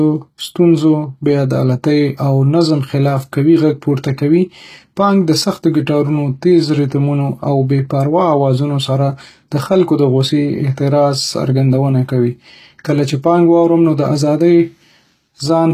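Speech with plainly audible HE-AAC compression throughout, likely from a low-bitrate encode, consistent with roughly 20 kbps: s sounds turn gritty and lispy. A spectrogram shows copied-looking treble bands and nothing above 14.9 kHz.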